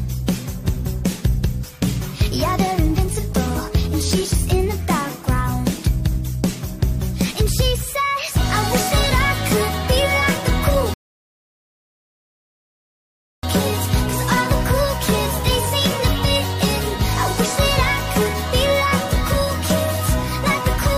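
At 10.94 s the audio drops abruptly into silence and stays there until 13.43 s, then picks up at the exact point it left off. This is a rebuffering stall: playback outran the downloaded data and paused, adding about 2.49 s without losing anything.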